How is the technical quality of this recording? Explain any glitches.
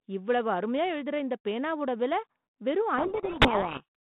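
There's one real glitch, heard over a narrow telephone-band line with the light coding grit typical of G.726, which points to the 32 kbit/s rate. From 2.98 to 3.86 s, right after "இந்தப் பேனாவோட விலை வெறும்", there's a codec payload misread: the decoder takes each G.726 code word's bits in the wrong order, burying the speech in harsh distortion.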